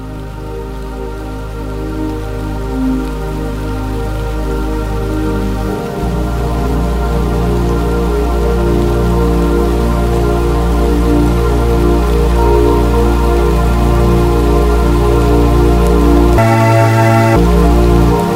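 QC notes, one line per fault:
16.38–17.36 s, section at the wrong speed: for just under a second the sound runs at 1.93 times its proper rate, so it turns hurried and thin and its pitch rises by around ten semitones, with tempo and pitch shifting together. Both return to normal abruptly at 17.36 s. The likely cause is a playback or editing stage clocking this segment at the wrong rate, which compresses the material in time and raises every frequency in proportion.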